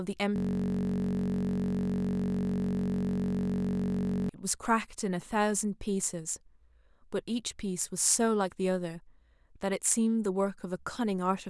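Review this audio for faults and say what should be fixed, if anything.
From 0.36 s to 4.29 s the speech gives way to a steady, low buzz at about 46.9 Hz, a mechanical drone with no forward movement. This is a system hang loop: the computer or driver stalled while the audio hardware kept replaying the same ring buffer. A 21.33 ms slice of sound repeats exactly, which fits a 512-sample buffer, and that rapid repetition merges into the buzz. Preventing it means fixing the driver or system stall and having the audio path mute or flush the buffer when the feeding process stops supplying data.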